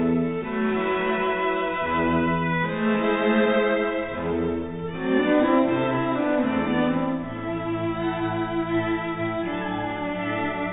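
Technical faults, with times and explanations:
No technical faults are audible anywhere in this clip.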